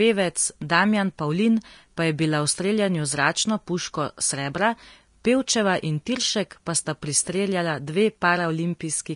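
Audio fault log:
Throughout: Vorbis compression, likely at a low bitrate near 35 kbps, where a coarse spectral floor and heavily quantised residue replace fine treble detail with noise of similar energy. The speech sounds hissy and grainy, attacks are blurred, and nothing remains above 10.5 kHz.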